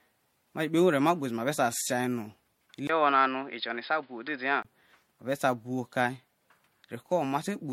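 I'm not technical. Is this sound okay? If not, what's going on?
No. The whole recording shows generation loss. It was most likely saved in a compressed format about three times over. Each save wore it down a little more. The speech sounds swirly and hollow, and the starts of sounds are smeared. Nothing is left above 16.5 kHz.

From 2.87 to 4.65 s there is an input switched to a poorer device, likely a lesser microphone. The sound turns dull and boxy, cut off above 5.1 kHz, with faint new background noise. A tiny gap marks the switch. Loudness stays about the same.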